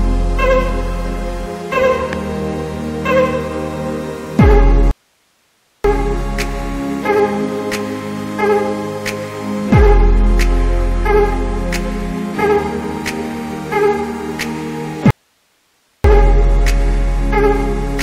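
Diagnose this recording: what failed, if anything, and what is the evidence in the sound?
At 2.13 to 2.15 s there's a single sharp pop sitting roughly 10 dB above the surrounding sound, which carries straight on underneath it. That's a loud pop, and it points to the analogue wiring stage, likely a plug, switch or static discharge putting a brief voltage step on the line. The following circuitry rounds it into one short pulse.

From 4.91 to 5.84 s the sound drops out abruptly for about 0.93 s, and the gap isn't silent: there's hiss sitting around 45 dB below the normal level, then the sound snaps back mid-flow. That's an audio dropout to a faint residue. The hard edges and live noise floor say the signal was cut upstream while everything after the break stayed powered, likely an intermittent connection in the analogue wiring.

At 15.11 s the sound stops dead, goes fully silent until 16.05 s, then picks up exactly where it left off, with nothing skipped. 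That's a rebuffering stall at the playback end fed by the network: the player drained its downloaded audio, waited for more data, and resumed. Nothing is lost, but about 0.94 s of dead air gets inserted into the timeline.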